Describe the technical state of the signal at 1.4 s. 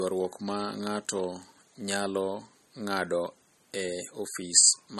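At 1.4 s, as throughout, the speech stops dead above 13.1 kHz with a swirly, smeared top. This is likely low-bitrate audio saved at a high bitrate: an MP3 at roughly 34 kbit/s was re-encoded at a much higher rate. Unlike a clean low-pass, it keeps those codec artefacts.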